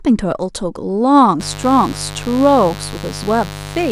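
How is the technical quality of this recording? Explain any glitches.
The recording is compromised by mains buzz over most of its length. From 1.40 s to the end of the clip, a steady, raspy buzz sits under the speech, roughly 15 dB below it. Sharp switching spikes from a dimmer, rectifier or poorly shielded cable leak into the signal path twice per cycle of the 50 Hz supply. The result is a dense stack of 50 Hz harmonics extending into the kilohertz range, which gives the buzz its harsh, edgy quality.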